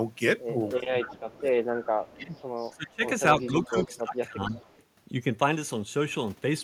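From 0.74 to 4.54 s the speech dips by up to about 20 dB, roughly two seconds in total; this is likely speech suppressed in double talk by the echo canceller. Echo leak appears at 0.78 to 2.9 s and 3.45 to 4.81 s: a 269 ms delayed copy, about 25 then 20 dB down, likely from incomplete loudspeaker echo cancellation.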